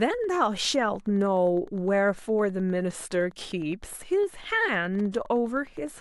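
Wi-Fi interference runs through the whole speech clip: a nearby Wi-Fi radio's beacon, sent every 102.4 ms, is picked up and rectified by the audio circuit, producing a steady ticking just under ten times a second, roughly 35 dB below the speech.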